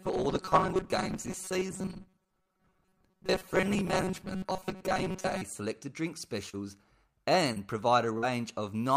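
From the start to 5.4 s, just before "selected drink", the speech becomes a rigid, metallic buzz near 188 Hz that only loosely tracks the words. This robotic sound most likely comes from repeated short buffers: audio arrived too seldom, so about half the time was filled by replaying roughly 5 ms slices, which fits that fixed pitch.

Right after "selected drink", at 6.49 to 6.56 s, a brief smear passes through the sound. This is short concealed packet loss. A 40 ms stretch never arrived, and the receiver extended the preceding sound for 37 ms before blending back. It recurs at 7.53 to 7.59 s, concealed over 31 ms, and at 8.18 to 8.25 s, over 44 ms.

Within each of those gaps, at 6.53 to 6.55, 7.56 to 7.58 and 8.22 to 8.24 s, a 20 ms frame sounds rougher and noisier. These are lost packets rebuilt from error correction: the following packet carried a low-bitrate copy, which the decoder played instead of leaving silence.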